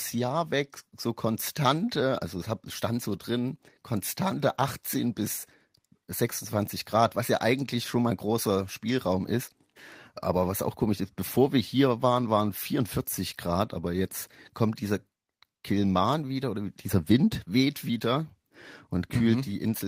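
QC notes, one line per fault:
No faults found anywhere in the speech track.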